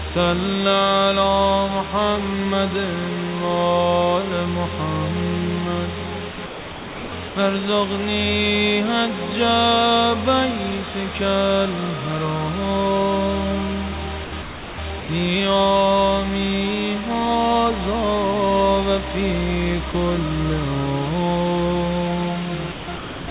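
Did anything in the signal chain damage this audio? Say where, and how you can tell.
Yes. At the sample-format conversion stage, a constant, even hiss nearly as loud as the sound itself runs through the whole clip without distortion. This is low bit depth with dither, consistent with about 4-bit quantisation. A spectrogram shows a flat noise floor up to the call codec's 4 kHz cutoff, and the waveform rides on a thick, fuzzy bed.

In call processing, the sound turns choppy from 6.32 to 7.36 s, 14.24 to 15.08 s and 22.72 to 23.28 s. About 800, 520 and 480 ms of it is swapped for synthetic background. This is sound chopped by the voice detector, likely from its gating. The waveform shows stretches of real sound broken by flat, even noise patches, and the spectrogram texture flickers between them.

Also in call processing, at 19.92 s a 20 ms slice of sound is lost and steady comfort noise fills the gap. 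This is sound dropped by the voice detector, likely because the detector took that moment for background. The waveform shows a thin notch of uniform low noise, and the spectrogram shows a narrow vertical strip of smooth texture.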